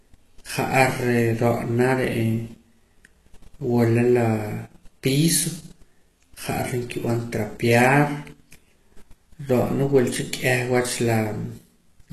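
HE-AAC compression, likely the cause, runs through the whole recording: nothing sounds above 12.3 kHz, and the treble below that is rebuilt from copied lower bands, so sibilants in the speech turn gritty and metallic, a plainly audible damage that fits a bitrate near 16 kbps.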